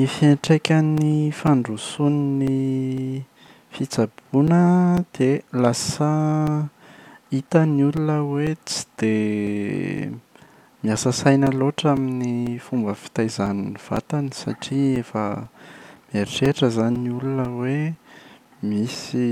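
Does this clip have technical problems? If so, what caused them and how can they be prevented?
Yes. Periodic USB or driver dropouts click through the speech every 0.5 s from 0.47 s to 18.96 s. Something stalls the audio driver on a fixed schedule, silencing about 4 ms each time. These show as evenly spaced flat waveform gaps and thin vertical spectrogram lines. Disabling the interfering background task or enlarging the driver buffer would prevent it.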